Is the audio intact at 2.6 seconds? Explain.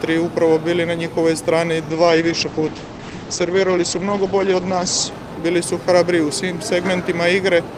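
No, 2.6 s sits inside a call bitrate drop running from about 1.91 to 5.17 s. The bandwidth estimate fell, so the encoder had to spend far fewer bits, which fits a slide from around 48 kbps down to roughly 11 kbps for most of that stretch. It codes coarsely and trims the top end from 20 kHz to 8 kHz, so the sound goes muffled and rough until it recovers.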